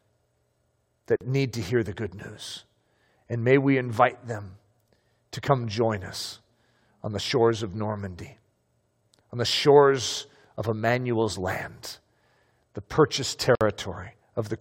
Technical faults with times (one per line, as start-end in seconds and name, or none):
1.16-1.21 gap at a join of encoded pieces
13.55-13.61 gap at a join of encoded pieces